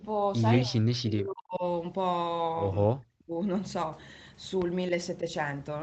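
At 0.65 to 1.63 s and 2.94 to 3.34 s the speech sinks by roughly 40 dB, with a shallow dip of about 5 dB at 5.2 to 5.25 s. This is likely speech suppressed in double talk, where the echo canceller turns the talker down along with the loudspeaker echo while the far side is playing.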